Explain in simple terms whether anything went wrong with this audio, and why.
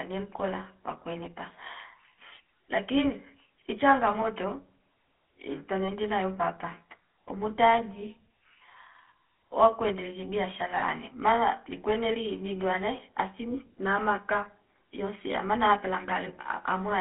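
Yes, two things went wrong. The whole recording went through the GSM full-rate codec, an old mobile-phone voice coder. It keeps only roughly 250 Hz to 3.4 kHz, so speech sounds thin, buzzy and gravelly.

There are also lost GSM frames at 4.22 to 4.27 s, 5.84 to 5.90 s and 10.78 to 10.84 s. Each time, the phone repeated the last good sound, producing a brief rough, metallic ring.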